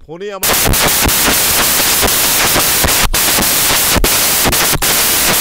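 From 0.43 s to the end, the samples are built from the wrong bytes, so the fast-changing low bits become the large part of each value. It sounds like loud white noise. Unlike added hiss, it replaces the speech and thins only in near-silent gaps.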